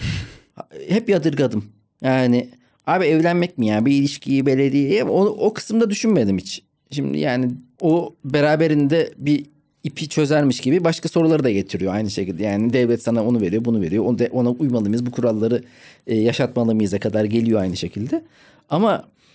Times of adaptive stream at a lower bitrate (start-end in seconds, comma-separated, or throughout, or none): none